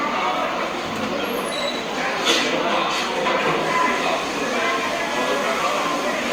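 Everyday sounds, interrupted by three abrupt skips. At 0.52 s and again at 1.6 s the sound jumps forward by a few hundredths of a second. At 5.6 s the jump is longer, about a tenth of a second. There is no gap of silence. The likely cause is a dropped buffer (overrun): the audio was not read in time, so those blocks were overwritten and the surrounding audio was joined directly.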